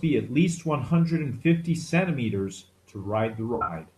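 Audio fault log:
0.88 to 0.91 s, corrupt frame concealed: a brief concealed stretch in the speech, about the length of one damaged AAC frame. The decoder caught the bad bits and papered over them.
3.55 to 3.73 s, corrupt frame concealed: a longer concealed stretch, about 0.19 s, which fits a run of several frames. It's muted or filled with a scrambled copy of the last good spectrum.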